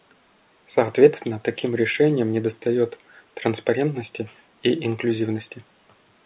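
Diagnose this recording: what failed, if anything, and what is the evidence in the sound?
Nothing stood out on listening to this speech recording that would point to a failure at any stage of the chain.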